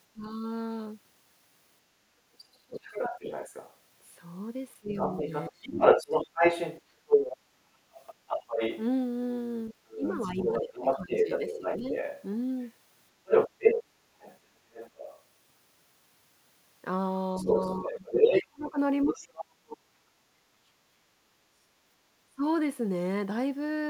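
At 0.13 s the speech briefly dips for about a tenth of a second, dropping by roughly 20 dB. This is speech suppressed in double talk, likely caused by the echo canceller ducking its own talker while the far end was also active. From 2.33 s to 15.23 s the other side's voice is leaking through. A second voice sits about 5 dB above the level of the main speech, likely residual loudspeaker echo that the canceller failed to subtract from the microphone signal. Within that stretch, double-talk suppression cuts in twice. From 4.8 s to 7.87 s the talker is pulled down by as much as about 30 dB over roughly a second in total. From 9.7 s to 11.93 s a shallower dip of about 15 dB again adds up to around a second. Both are likely the canceller attenuating the whole mix because it could not separate near speech from echo. The leak returns from 17.36 s to 19.28 s. Overlapping it, from 17.39 s to 19.8 s, comes the deepest suppression in the clip, about 35 dB across roughly one and a half seconds, likely the same double-talk confusion. 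A final short dip of about 20 dB, lasting roughly 150 ms, occurs at 22.28 s, likely another brief double-talk clamp.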